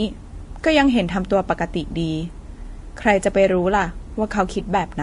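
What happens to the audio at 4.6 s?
At 4.6 s you're hearing the same thing that runs through the whole clip: nothing above 10.6 kHz, plus smeared, swirly artefacts from a low-rate first encode layered under a second codec's own grit. That stacked sound points to transcoding between lossy codecs, likely a Vorbis file re-encoded to WMA.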